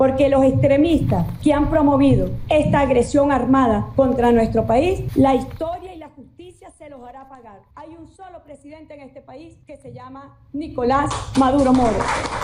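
From 10.33 to 10.97 s, zipper noise rides on a level change of roughly 25 dB. The gain moves in rapid unsmoothed steps, around 400 per second, each adding a tiny click.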